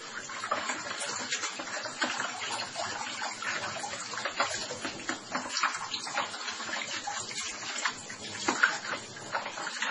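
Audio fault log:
throughout: MP3 compression, likely at a very low bitrate consistent with about 24 kbps, left too few bits, so the encoder dropped everything above 10.5 kHz and let weak frequency lines flicker between frames, giving heavy, dull, watery swirling and smeared attacks across the sound.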